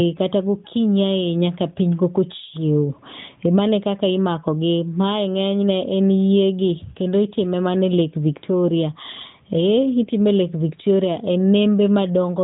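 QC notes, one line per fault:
No faults found in this speech. The AMR narrowband mobile codec path is audible in the lack of anything above 4 kHz and a light coded texture that fits its highest 12.2 kbps mode.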